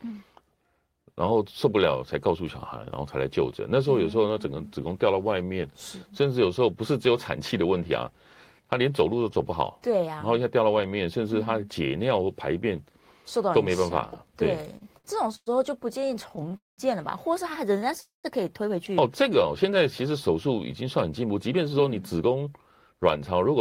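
From 14.77 to 15.49 s the speech shows repeated stalls (stutter): four holds, the longest 111 ms, together filling about 0.21 s, or 29% of that stretch. Packets reached the receiver more slowly than playback consumed them, so the jitter buffer kept emptying and the last sound was stretched until more arrived. It drags and hiccups. A second run from 16.00 to 16.54 s has seven much shorter holds, none over 18 ms, totalling 84 ms. On a spectrogram these appear as short smeared, horizontally frozen patches interrupting the normal formant movement.

Two call audio freezes follow, at 16.57 to 16.81 s and 18.00 to 18.27 s. In each, the last sound is held as a brief buzz or hiss that fades into silence, 170 ms in the first and 140 ms in the second, before the speech resumes where it left off. Nothing is lost; the delay simply grows by 210 ms and 234 ms. The likely cause is packets held up in transit, draining the buffer. 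In the waveform these show as a decaying tail dropping to a flat line, then an abrupt restart.

From 21.54 to 23.57 s a jitter buffer speed-up runs the speech at about 111% of normal rate with pitch unchanged, trimming roughly a fifth of a second. The buffer had accumulated surplus delay, and the receiver repeatedly cut out short pitch-period-sized pieces to catch up, leaving the delivery sounding hurried. A spectrogram shows compressed syllables with unchanged harmonic spacing.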